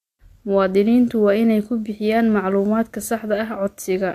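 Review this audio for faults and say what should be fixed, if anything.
Nothing stood out on listening, so there is nothing here that needs fixing.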